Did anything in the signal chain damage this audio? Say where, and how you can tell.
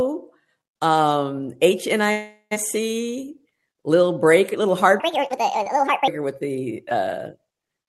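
Yes. At 2.11 s the sound stops moving forward and the last moment is stretched into a fading buzz. It runs until 2.53 s and ends in about 70 ms of silence before the audio resumes where it left off, with nothing skipped. That is a call audio freeze at the network and jitter-buffer stage. Packets were likely held up in transit, the buffer ran empty and the receiver filled the 397 ms wait, so everything afterward arrives that much later.

From 5.00 s to 6.08 s the speech turns high and hurried, pitch and pace rising together by roughly seven semitones, then drops back to normal. That is a section at the wrong speed, running at 1.58 times its recorded rate. Because pitch and tempo shift together for this one stretch, the likely cause is an editing or playback step that resampled the segment against the wrong clock.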